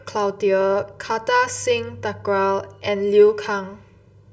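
Throughout, channel delay causes comb filtering. One channel lags roughly 2 ms, so mono summing cuts regular notches from around 300 Hz, leaving the speech hollow and phasey.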